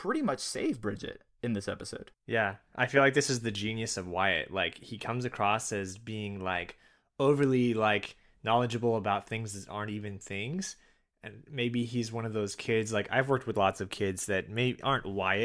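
No technical faults are audible.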